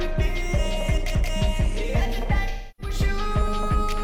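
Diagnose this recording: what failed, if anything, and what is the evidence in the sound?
The fault is at the codec stage: AAC frame loss with concealment from 2.48 s to 2.94 s. The decoder covers the gap, which fits about seven lost frames, by rebuilding from the last good spectrum. On a spectrogram, that gap shows as frozen, blurred spectral content.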